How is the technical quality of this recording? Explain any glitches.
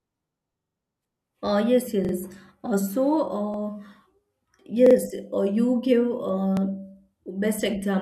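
The recording has five repeated-buffer stutters, at 0.60–0.77 s, 2.05–2.13 s, 3.54–3.58 s, 4.86–4.95 s and 6.57–6.61 s. Each time, new audio arrived late and the device replayed its last block of about 43 ms, which fits a 2048-sample buffer. The block replays four times in the first event, twice in the second and fourth, and once in the third and fifth. Each repeat ends at a hard join, so the speech stutters briefly. Nothing is dropped, and the speech resumes where it stopped.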